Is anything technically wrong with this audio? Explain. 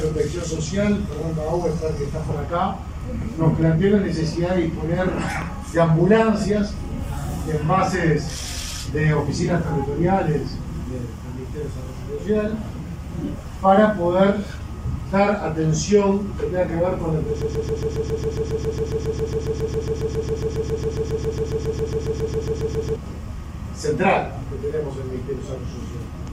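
Yes. From 17.42 to 22.96 s there is a broken-record loop. A 137 ms fragment repeats exactly, back to back, about forty times. The player or stream likely stalled and kept resending its last fragment. The audio due in that span never plays.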